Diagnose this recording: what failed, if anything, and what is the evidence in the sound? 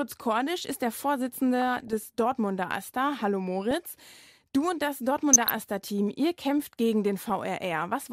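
DAB burbling, at the reception-to-codec stage: short noise blips from 1.60 to 2.04 s and again from 5.33 to 5.50 s. Bit errors at a fraction of a percent slipped past error correction into the MP2 data, corrupting samples in individual sub-bands.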